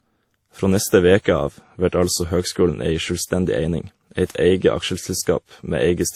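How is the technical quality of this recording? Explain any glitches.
The recording has layered coding artefacts the whole way through. It's transcoding between lossy codecs, likely WMA followed by Opus, with a texture that fits roughly 48 kbit/s each. Opus re-encodes WMA's artefacts, so both codecs' artefacts sit together, and nothing is left above 20.1 kHz.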